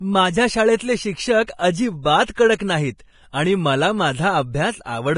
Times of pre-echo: 1.44-1.59, 2.58, 2.98

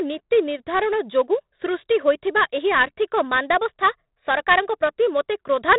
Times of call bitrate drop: none

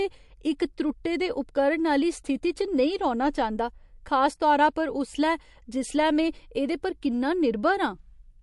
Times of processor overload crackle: none

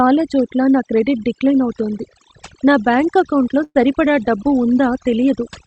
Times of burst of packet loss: 3.63-3.77

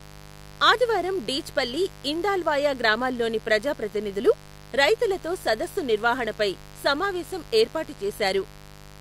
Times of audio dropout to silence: none

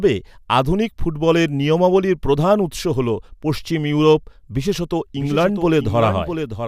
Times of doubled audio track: 4.91-6.67

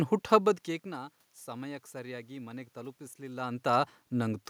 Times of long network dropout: none

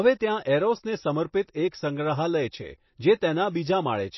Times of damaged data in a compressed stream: none

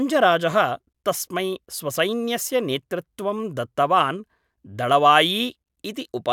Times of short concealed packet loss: none

